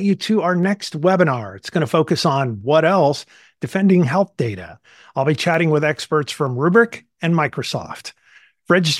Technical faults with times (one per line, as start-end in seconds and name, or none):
0.63 dropped samples
5.54 dropped samples
6.47 dropped samples